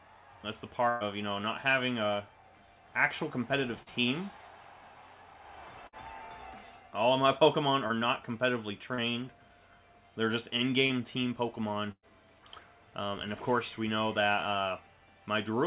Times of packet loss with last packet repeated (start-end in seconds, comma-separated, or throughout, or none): none